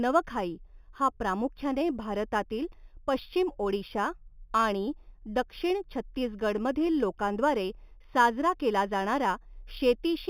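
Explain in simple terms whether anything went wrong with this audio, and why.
Imaging from linear upsampling runs through the whole clip. The speech was raised to a higher rate with crude straight-line steps, which fits an 8 kHz original, leaving dull highs and a faint metallic shimmer on hissy sounds.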